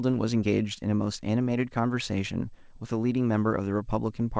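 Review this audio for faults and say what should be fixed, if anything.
Nothing stood out on listening to this speech recording, so there is nothing here that needs fixing.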